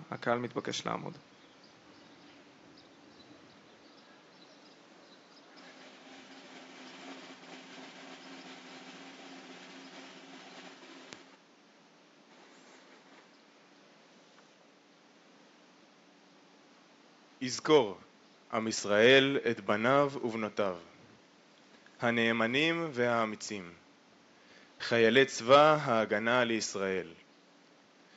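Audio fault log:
No faults heard anywhere in this recording.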